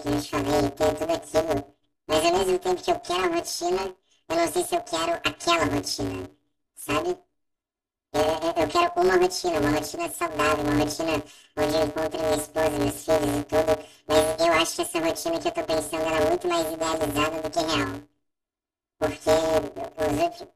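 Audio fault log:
Throughout: planar audio read as interleaved. Each 5.8 ms block plays left then right halves at double speed, giving a robotic 172 Hz buzz rather than an octave jump.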